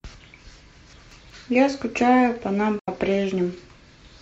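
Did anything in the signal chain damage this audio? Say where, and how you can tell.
Yes. Between 0.93 and 1.30 s, the buffering stage delivered chunks out of order. A 186 ms chunk plays one slot late, so the speech jumbles briefly.

At the codec, AAC frame loss with muting leaves a soft-edged gap from 2.79 to 2.89 s. About 85 ms, consistent with two zeroed frames, fades out and back in through the overlapping windows.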